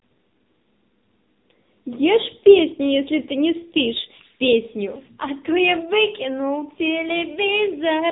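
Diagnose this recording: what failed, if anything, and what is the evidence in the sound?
AMR narrowband mobile codec throughout, codec stage: nothing passes above 3.8 kHz, and its pulse-driven vocal-tract model leaves speech buzzy, which fits a 6.7 kbps mode.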